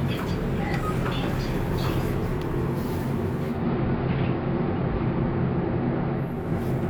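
At 3.29 s the digital radio blending to analogue begins: the receiver lost its digital signal and cross-faded over about 411 ms to the AM broadcast. The level shifts about 2 dB, and faint hiss sits well below the sound until 6.51 s.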